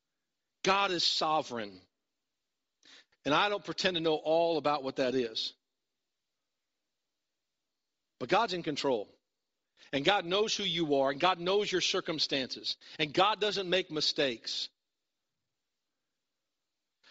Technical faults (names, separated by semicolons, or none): Bluetooth LC3 compression